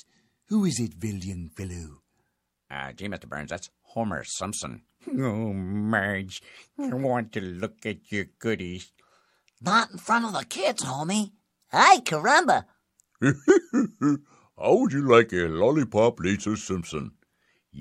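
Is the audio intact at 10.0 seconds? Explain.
Yes, at 10.0 seconds the speech is intact, with no fault heard at that moment.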